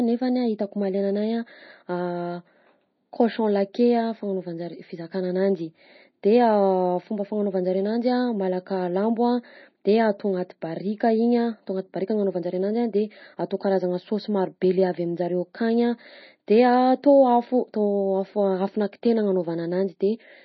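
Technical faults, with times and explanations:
Throughout, MP3 compression: the speech sounds watery and swirly, with smeared, metallic sibilants, likely from heavy MP3 encoding at a bitrate near 24 kbps. A spectrogram shows a flat cutoff at 5.9 kHz and speckled holes where weak bands drop out between frames.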